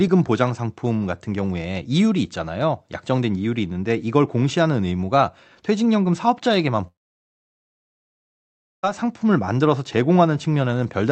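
From 6.87 s to 8.85 s the speech breaks into a brief fading buzz, then nearly two seconds of silence, and resumes with about 1.96 s lost. The likely cause is a long network dropout, with the receiver stretching the last sound before falling silent.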